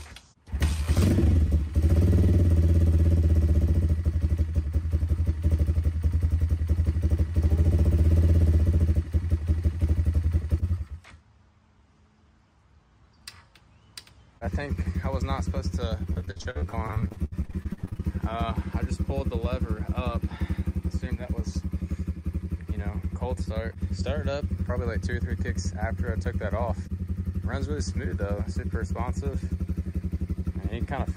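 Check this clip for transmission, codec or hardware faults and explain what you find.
There's one transmission fault: repeated packet loss (robotic sound), from 16.13 to 18.01 s. A couple dozen dropouts, the longest about 71 ms, get patched by stretching the last sound, so over a third of that stretch is filler. It comes out choppy, with pieces missing.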